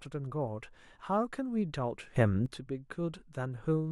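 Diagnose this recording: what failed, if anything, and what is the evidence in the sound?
A sudden gain jump appears in the digital processing chain: from 2.16 to 2.46 s the speech and its background noise step up together by about 10 dB, then drop back. The noise rising with it, with no ramp, rules out a speaker raising their voice or slow automatic gain control, and points to a setting likely applied instantly.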